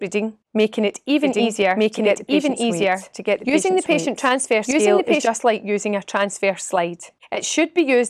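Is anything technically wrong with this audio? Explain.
Yes. From 1.22 s to 5.28 s there is a doubled audio track: a second, full-band copy of the sound runs about one second behind the original and at roughly the same level. It is likely caused by a slower capture path or an edit that leaves two copies out of step. The copy has no decay or added room colour and starts and stops abruptly. On a spectrogram, each pattern reappears one second later. In the waveform, the two layers overlap with hard edges.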